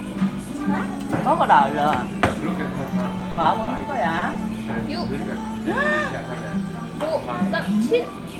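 An everyday-sound recording, marred by repeated packet loss (robotic sound) from 3.19 to 3.81 s. Five gaps, the longest 60 ms, were patched with about 160 ms of synthesized continuation, roughly a quarter of that stretch. Each hole is filled by extending the last received sound, so the passage turns choppy with pieces missing. On a spectrogram the patches appear as frozen, smeared blocks with hard edges. The waveform shows copied cycles repeating where real detail should be. Shortly after come two instances of short concealed packet loss, at 4.19 to 4.23 s and 4.33 to 4.37 s, each replacing about 20 ms of audio that arrived too late or not at all. The receiver continued the preceding sound and cross-faded back into the real signal, leaving a brief smear or wobble. On a spectrogram each shows as a narrow column of blurred, flattened energy, and in the waveform a short repeated or noise-like segment interrupts the natural envelope.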